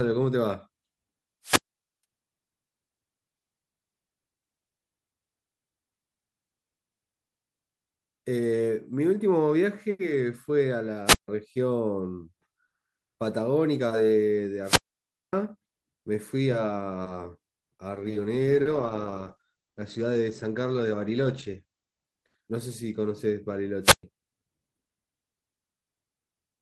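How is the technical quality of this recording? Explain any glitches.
The speech is interrupted by two kinds of glitch: repeated wireless dropouts and a stretch of degraded call coding.

Wireless microphone squelch dropout at 1.43–2.04, 11.05–11.28, 14.62–15.33 and 23.82–24.03 s. The radio signal fades, the receiver's squelch mutes it, and holes of about 0.48, 0.15, 0.57 and 0.12 s follow a brief hiss.

Call bitrate drop from 17.9 to 23.6 s. The encoder's bit budget fell, which fits a fall from 32 to 14 kbps held for about 3.7 s. Speech turns rough and muffled, with highs cut to 8 kHz.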